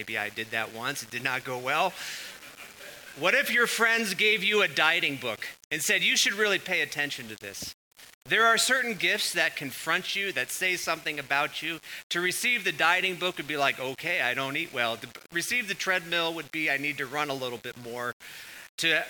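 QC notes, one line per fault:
Throughout: low bit depth without dither. The sound has a grainy, rough distortion that rises and falls with the material. Quiet passages turn gritty, and the softest moments thin out or sputter between steps instead of fading smoothly. The error sits only about 20 dB below the signal, so it is never far off. The likely cause is rounding to around 7 bits with no dither, which leaves the error tied to the signal rather than spread as steady hiss.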